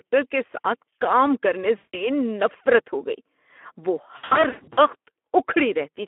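This is a speech clip carried through the Speex codec at about 11 kbps on a line limited to roughly 250 Hz to 3.4 kHz, so it sounds thin and telephone-like throughout. The codec damage is plainly audible: the low bitrate leaves too few bits for the excitation signal, and the voice comes out hoarse and grainy with a noisy edge. There are also two spots of VoIP packet loss concealed by the speech codec. The first runs from 1.77 to 2.07 s, between "کام کرنے" and "نفرت ہو". About 160 ms of audio drops out there, which fits eight lost 20 ms frames. The decoder fills the gap by repeating its last pitch and filter at falling gain, so the speech smears into a fading buzzy tone or coloured noise. The second is from 4.17 to 4.81 s. It's choppier: about 380 ms is lost in bursts spread over some 600 ms, the longest run being 120 ms. Each concealed stretch carries into the next frames, so the voice stays weak or distorted for a moment after each gap.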